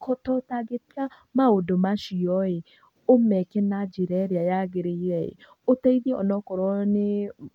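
No technical faults can be heard anywhere in the speech recording.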